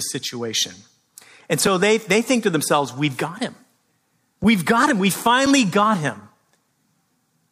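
Speech clip with two blocks of digital silence, each about 5 ms, at 4.44 s and 5.46 s. The abrupt dropout and return produce short clicks, consistent with an output buffer not filled in time.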